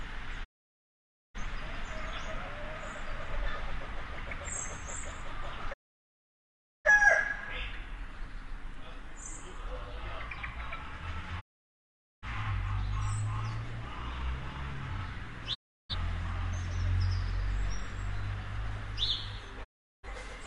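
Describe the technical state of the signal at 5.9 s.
At 5.9 s you're right inside a digital broadcast dropout, running from about 5.72 to 6.90 s. The receiver stopped getting clean frames and muted itself rather than play corrupted data, so the sound fades out over roughly 20 ms and then there's just silence for about 1.1 s, which fits a couple of dozen frames in a row failing. When it comes back, the audio has simply moved on; whatever was sent during the gap is gone.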